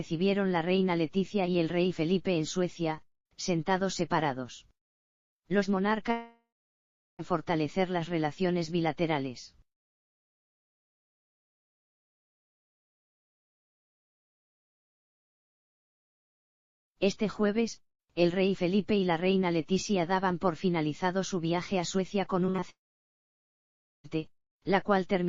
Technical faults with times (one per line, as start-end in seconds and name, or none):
6.11-7.21 long network dropout
22.47-22.64 repeated packet loss (robotic sound)
22.70-24.06 long network dropout